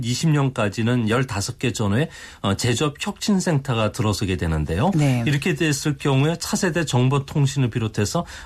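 Speech recording with no technical faults audible anywhere in the clip.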